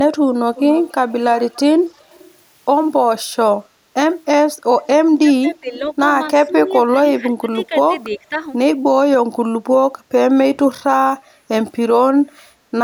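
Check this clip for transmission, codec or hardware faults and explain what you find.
Two kinds of fault are present in this speech clip. There is echo leak at 0.55–1.12 s, 1.48–2.27 s, 4.83–4.87 s and 7.63–7.67 s. It sounds like a faint copy trailing 282 ms behind, roughly 15 to 30 dB down. It is likely from an incomplete echo cancellation, and shows as a repeated, weaker version of the speech's spectrogram pattern.

There is speech suppressed in double talk at 5.16–5.67 s and 6.46–8.41 s. The voice dips by up to about 25 dB while both sides talk. This is likely the canceller ducking everything, and it appears as waveform notches.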